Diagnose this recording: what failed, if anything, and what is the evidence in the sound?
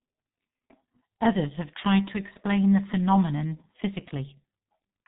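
The codec stage is the culprit: this speech has been through G.723.1 the whole way. Nothing gets past about 3.8 kHz, so it's muffled, and the hoarse, smeared consonants point to a very low rate, consistent with its 6.3 kbit/s mode, where 30 ms frames can't track fast changes.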